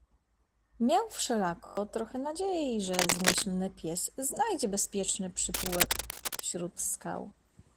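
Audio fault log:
Throughout: Opus voice compression. At 16 kbps in hybrid mode, the band below 8 kHz is carried by the linear-prediction coder and the top of the fullband range by a thin transform layer. The excitation is coded coarsely, so the speech sounds muffled, hoarse and faintly robotic. On a spectrogram, harmonics below 8 kHz look smeared in 20 ms blocks, and above that the energy is patchy and blotchy.
1.66–1.77 s: system hang loop. One 21.33 ms piece of audio repeats exactly five times, which fits a 1024-sample ring buffer cycling while the system stalled. About a tenth of a second of real audio is lost and replaced by a rough buzz at 46.9 Hz. The waveform shows identical repeated segments with a step at each seam. The spectrogram shows vertical lines every 21 ms and harmonics spaced at 46.9 Hz.
2.93–3.44 s and 5.54–6.47 s: cable scratch noise. Dense, uneven scratching and rustling sits over the speech, about 5 dB above it in the first burst and roughly level with it in the second. 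This is likely a worn cable or connector being moved, with contact resistance jumping rapidly. The waveform shows jagged, spiky clusters riding on the signal. The spectrogram shows broadband, irregular speckles with vertical streaks.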